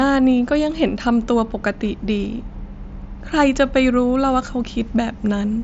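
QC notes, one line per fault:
4.75 s, concealed Bluetooth headset packet loss: a 7.5 ms gap, fitting one lost packet, was filled by copying the best-matching recent stretch of waveform, so it is nearly hidden. The waveform shows a brief repeated cycle, and the spectrogram a faint vertical seam.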